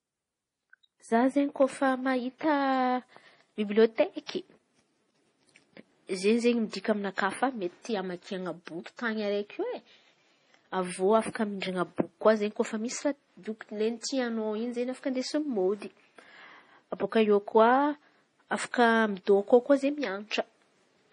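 Throughout the speech, nothing is present above 10.5 kHz, and the remaining high band has a watery, swirling quality, with sibilants breaking into metallic chirps and consonant onsets blurred. The likely cause is heavy MP3 compression. Short of bits, the encoder has cut the treble at a fixed frequency and zeroed weaker spectral lines, which flicker on and off from frame to frame. The damage points to a low bitrate, around 32 kbps.

Pre-echo occurs from 4.26 to 4.29 s, spreading over 27 ms, and again at 11.60 s, over 19 ms. In each case a brief hiss comes just before a sharp attack, and the attack itself sounds softened. The codec spreads its quantisation noise across the whole transform block, so noise sized for the loud onset also fills the quiet stretch ahead of it.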